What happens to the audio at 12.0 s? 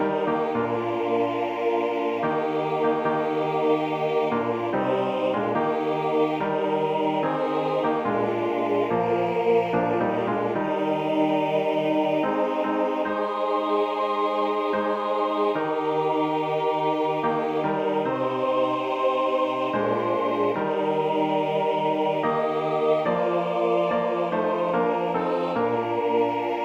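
At 12.0 s the audio runs on intact, with no dropout, click, distortion or other fault at that point.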